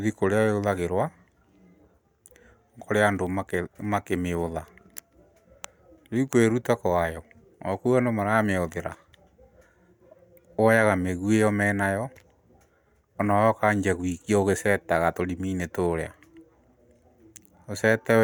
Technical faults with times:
none

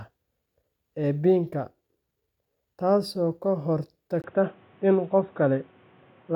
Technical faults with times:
4.22-6.35 input switched to a poorer device

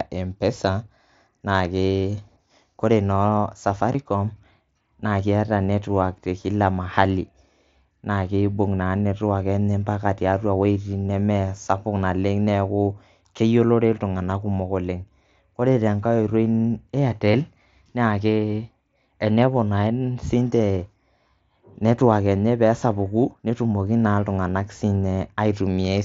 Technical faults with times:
3.93 concealed Bluetooth headset packet loss
10.74 concealed Bluetooth headset packet loss
17.32 concealed Bluetooth headset packet loss
21.87 concealed Bluetooth headset packet loss

